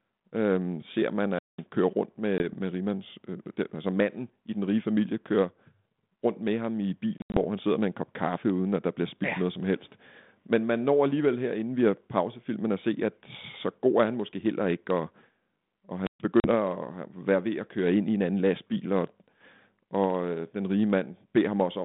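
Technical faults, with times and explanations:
1.31–1.65 s: wireless microphone squelch dropout. The radio link fades, hiss rises, then the receiver mutes the output for about 200 ms before the speech returns.
2.38 s: packet loss on an ADPCM call. A 20 ms hole, roughly one packet; the decoder's predictor loses step, so speech resumes with brief distortion.
7.18–7.37 s: packet loss on an ADPCM call. About 120 ms lost across 160 ms, longest gap 80 ms; repeated hard-edged holes, each followed by distorted recovery.
16.03–16.22 s: wireless microphone squelch dropout. Signal fades into static, then squelch cuts the output for about 130 ms before speech comes back.
16.40–16.49 s: packet loss on an ADPCM call. A 40 ms gap, roughly two packets; the out-of-step adaptive step size makes the returning speech distort briefly.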